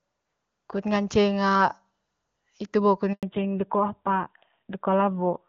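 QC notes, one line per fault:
3.13 to 3.23 s, handover gap. Right after "hitu bo kut" the speech cuts out for 100 ms. The call is being switched between networks. No speech frames arrive during the switch, so the sound fades fast and stays silent. Anything said then is lost.
3.23 s to end, fallback to narrowband. From the same point after "hitu bo kut", nothing above 4 kHz remains. Before this the speech had the clean, wideband sound of high-rate HD Voice. Now it is duller and rougher, which fits an older narrowband codec at a low bitrate.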